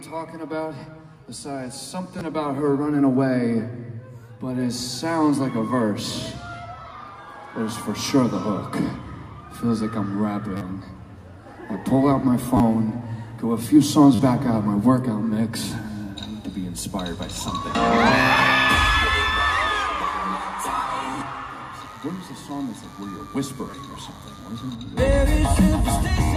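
Playback repeatedly ran short of fresh audio, so the device replayed its last buffer instead of waiting. The repeats fit a buffer of about 10 ms. This repeated buffer fault appears at 2.19–2.21, 10.57–10.61, 12.57–12.60, 14.15–14.19 and 18.35 s. Each time the same tiny slice plays once to four extra times, with a hard join at every repeat. Because each slice is so short, the repeats come out as a click or a brief buzz.

From 21.80 to 24.76 s a DECT cordless phone buzz sits underneath the audio. A nearby DECT handset or base sends a radio burst every 10 ms, and the audio circuitry rectifies it into a steady, thin 100 Hz buzz with many harmonics, roughly 30 dB below the main signal.

Within that stretch the repeated buffer fault returns at 22.29 and 23.71–23.73 s. These give further 10 ms buffer repeats layered over the buzz.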